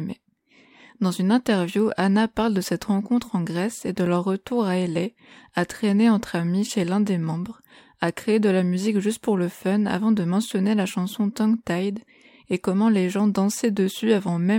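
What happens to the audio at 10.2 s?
Nothing goes wrong at 10.2 s; the speech continues intact through that moment, with no dropout, click, distortion or other fault.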